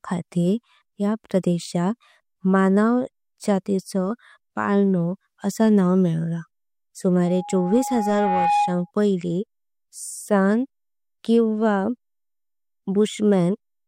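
Between 7.25 and 8.91 s, loudspeaker feedback squeal: the microphone-speaker loop runs away at 826 Hz, a tone swelling to roughly speech level.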